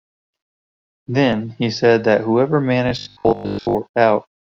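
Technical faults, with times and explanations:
2.89–3.75 s, robotic sound from repeated short buffers: right after "he said that whoever", the speech hardens into a rigid metallic buzz at 50 Hz, likely from audio arriving too seldom, with a slice of about 20 ms looped over most of this stretch.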